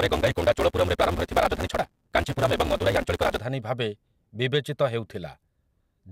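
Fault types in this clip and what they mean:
Block size mismatch (truncated): block tails are discarded, giving a 172 Hz buzz, which fits 256-sample reads, and speech running 1.88 times fast until 3.4 s.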